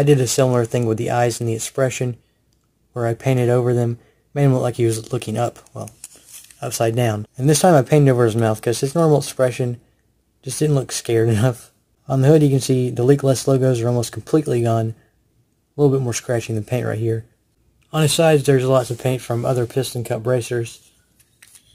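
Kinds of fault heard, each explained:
Crude rate conversion: the sample rate has been changed without a proper filter, with samples simply dropped at the nearest position. The result fits a 48 kHz to 44.1 kHz conversion. Across the whole clip the timing errors repeat in a fixed cycle and add an inharmonic gritty fizz roughly 25 dB below the sound, strongest on loud, bright passages. A spectrogram shows faint mirrored partials unrelated to the real ones, and the waveform has tiny regular jogs.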